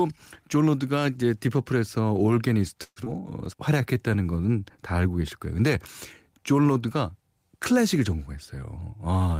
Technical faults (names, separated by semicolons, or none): call audio freeze; skip ahead; jitter buffer slow-down; jitter buffer speed-up